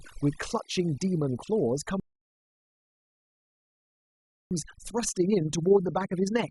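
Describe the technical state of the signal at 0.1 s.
At 0.1 s the speech carries overdone noise removal, and it runs through the whole clip. The noise reduction is set far too aggressively. Any frequency band that sits close to its noise estimate gets pushed down hard or cut out, including the quieter parts of the voice. So the background between sounds drops and breaks up into small twinkling specks.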